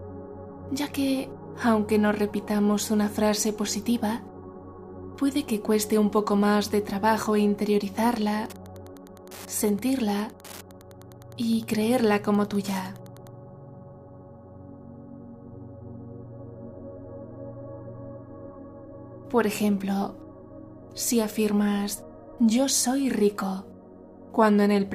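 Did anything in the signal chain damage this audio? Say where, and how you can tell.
Yes, there's Wi-Fi interference in the analogue wiring from 8.44 to 13.35 s. You hear a steady tick about ten times a second, spaced 102.4 ms apart, roughly 25 dB under the sound. That's a nearby radio's beacon being rectified by the audio circuit.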